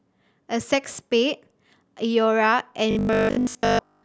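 From 2.91 s to the end, the speech turns into a rigid metallic buzz fixed at 50 Hz: robotic sound from repeated short buffers. Audio likely arrived too seldom, so the last 20 ms was repeated over and over across most of that stretch. Unlike gappy dropouts, there is no silence, only a steady pitched buzz that follows the speech roughly.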